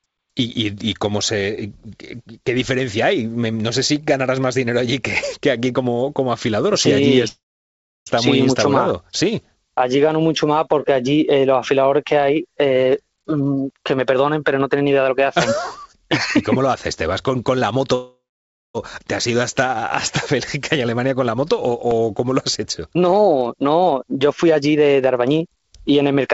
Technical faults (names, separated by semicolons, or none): call audio freeze; jitter buffer speed-up